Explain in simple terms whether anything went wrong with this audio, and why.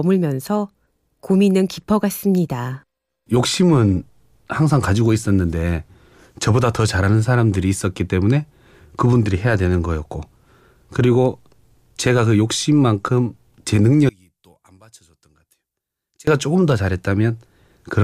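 Between 14.09 and 16.27 seconds, one of the two stereo channels was likely flipped upside down, a fault called one channel inverted. When the left and right sides are combined into a single channel, the two halves now work against each other and cancel out wherever they match. Because the talking sits in the centre, equally in both sides, it drops to a faint trace for those two seconds, almost disappearing.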